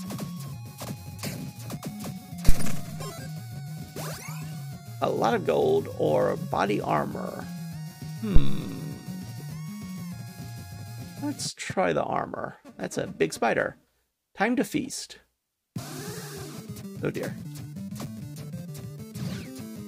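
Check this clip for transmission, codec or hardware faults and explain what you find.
Phantom power thumps at 2.49 to 2.93 s and 8.36 to 8.65 s: switching the supply on a live input sends a voltage step through the coupling capacitors, giving deep thumps that peak near about -4 and about -3 dBFS and decay over roughly 99 and 66 ms.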